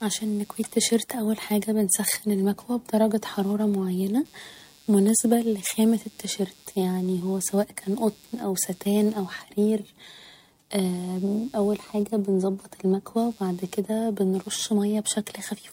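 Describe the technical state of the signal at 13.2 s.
Computer activity noise is present at 13.2 s, as it is throughout the clip. Shifting load from the processor, graphics card or mouse disturbs the ground that the audio circuit shares with the computer, and that ground movement leaks into the signal. It sounds like a buzzy, chirping texture pulsing at around 150 times per second, sitting roughly 35 dB below the speech. It follows the machine's activity rather than anything in the speech.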